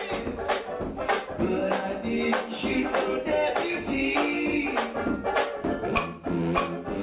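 No technical fault can be heard anywhere in the audio.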